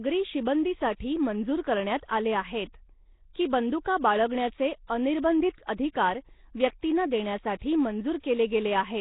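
From start to finish the speech carries heavy damage from what is likely Nellymoser compression, the old Flash microphone codec, at a rate that fits 16 kbps. Coding short blocks with a fixed, small bit budget starves the weaker bands, which get replaced with noise, and nothing survives above 3.8 kHz. The result is a rough, hissy halo around the speech, a smeared, underwater quality, and a dull, band-limited top end.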